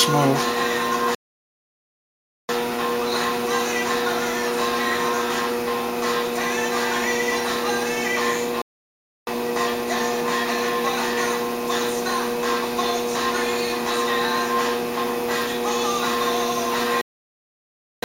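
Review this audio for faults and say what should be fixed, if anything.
There are three playback stalls where the sound just drops out mid-flow: 1.15 to 2.49 s (about 1.34 s), 8.62 to 9.27 s (0.65 s), and 17.01 to 18.03 s (1.01 s). The likely cause is the player starving for data or its thread getting blocked. A bigger playback buffer and keeping the audio thread free of blocking work should fix it.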